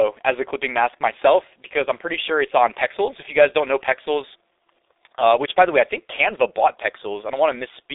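A speech recording passed end to end through the G.723.1 codec, and the heavy coding damage fits its low rate of around 6.3 kbit/s. The encoder models the voice in 30 ms frames and updates that model slowly, so consonants smear into their neighbours and the voice turns hoarse. The telephone line band cuts everything below 300 Hz and above 3.7 kHz, with nothing at all above 3.8 kHz, which leaves the whole clip thin and muffled.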